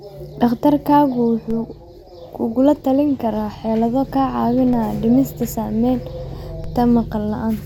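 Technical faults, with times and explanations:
1.51 s, 4.73 s and 6.64 s: DC steps. Each time the waveform's zero line suddenly jumps to a new offset, and you hear a low thump while the speech carries straight on. The offset then drains away, like a 5 Hz high-pass pulling it back to centre.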